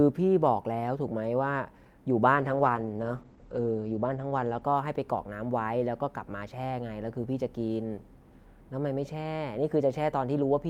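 At 2.37 s the speech becomes muffled and rough. This is a call bitrate drop. The connection's bandwidth estimate fell, so the encoder had to spend far fewer bits. The coarseness fits a fall from around 48 kbps to around 12 kbps. Detail above 8 kHz disappears, down from a 20 kHz top end. The worst stretch lasts about 1.37 s and sounds watery. Clarity returns by 5.31 s.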